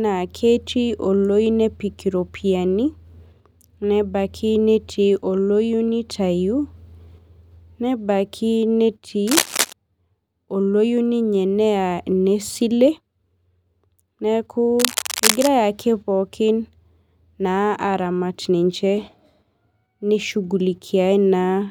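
Speech with cable scratch noise from 9.27 to 9.73 s and 14.78 to 15.47 s: dense, ragged crackle roughly as loud as the voice, showing as broadband speckled bursts on a spectrogram, likely from a worn cable or connector being moved.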